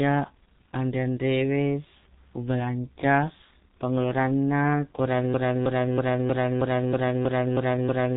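From the start the speech has been squeezed through the G.723.1 codec, a narrowband telephony coder working in 30 ms frames at a very low rate. The heavy damage fits a bitrate around 6 kbit/s. Nothing above 3.8 kHz survives, so the speech is muffled, and the slowly updated voice model leaves it hoarse, with consonants smeared together.

At 5.34 s a broken-record loop takes over and runs to the end. The likely cause is that the player, encoder or stream stalled and kept resending the last fragment in its buffer. A piece about 0.32 s long repeats nine times back to back with no change, and whatever should have followed is missing.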